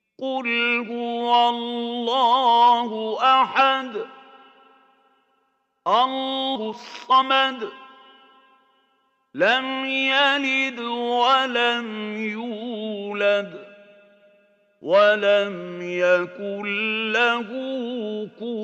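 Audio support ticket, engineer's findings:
Skip ahead at 6.55–6.57 s: about a second of audio gone, no fill, the two sides spliced almost directly. Jitter buffer dropping stale audio to catch up. Waveform shows an abrupt seam. The spectrogram shows a hard vertical discontinuity with no silence gap.

Jitter buffer speed-up at 6.59–8.60 s (115%, roughly 0.3 s removed) and 9.02–12.66 s (106%, roughly 0.2 s removed): hurried timing, pitch unchanged. Receiver trimming pitch-period chunks to shrink excess buffered delay. Spectrogram shows compressed events with harmonics at the same frequencies.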